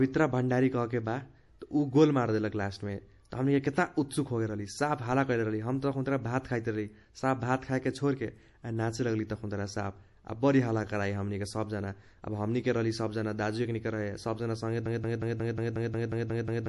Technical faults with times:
0.00-16.68 MP3 compression
14.86-16.68 broken-record loop

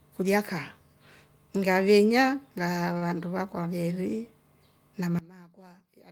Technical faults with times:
2.97-3.03 short stall from a late packet
5.19-6.12 one channel inverted

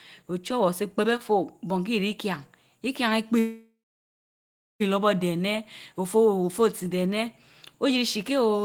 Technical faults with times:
3.39-4.82 call audio freeze

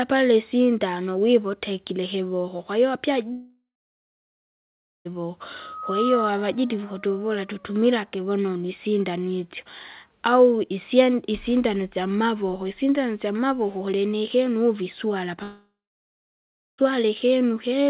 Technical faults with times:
3.32-5.07 long network dropout
5.59-6.34 loudspeaker feedback squeal
15.43-16.92 long network dropout

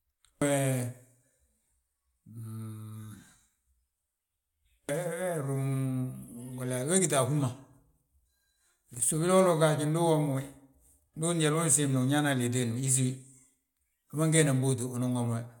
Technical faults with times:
8.94-9.04 loose connector crackle

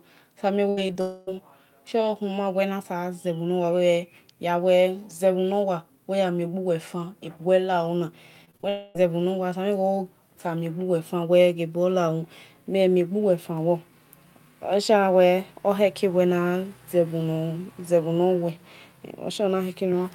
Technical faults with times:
0.69-0.79 burst of packet loss
0.87-0.97 short concealed packet loss
1.01-1.29 long network dropout
8.45-8.65 repeated packet loss (robotic sound)
8.69-8.97 long network dropout

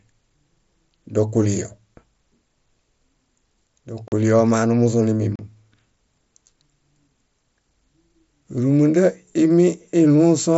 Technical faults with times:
4.08-4.12 block of digital silence
5.35-5.39 block of digital silence

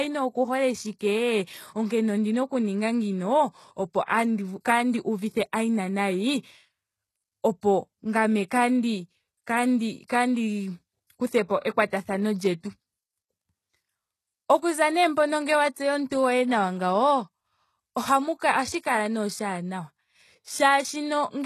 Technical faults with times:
0.00-21.45 HE-AAC compression

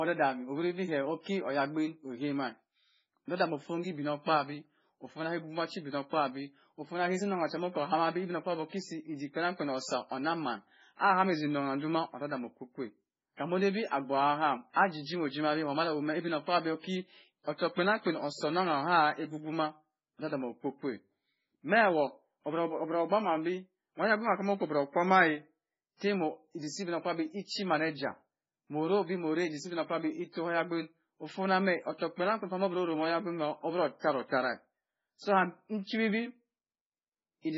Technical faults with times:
0.00-37.57 MP3 compression

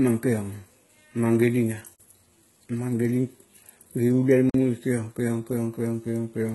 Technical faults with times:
0.00-6.55 HE-AAC compression
1.95-2.00 gap between chunks
4.50-4.54 gap between chunks

